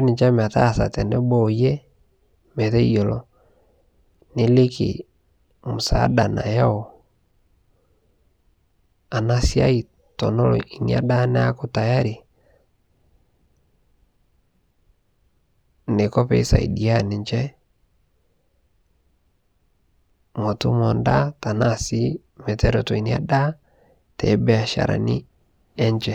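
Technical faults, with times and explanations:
No technical faults are audible anywhere in the speech recording; the signal holds steady and continuous throughout.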